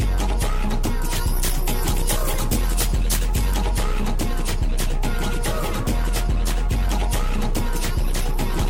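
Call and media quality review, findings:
Pre-emphasis left on, 1.16 to 3.54 s. Treble tilted up about 8 dB at 10 kHz relative to 1 kHz, fitting a CD-style 50/15 µs curve. Matching de-emphasis stage skipped on playback; sound thin, bright, sibilant throughout that span.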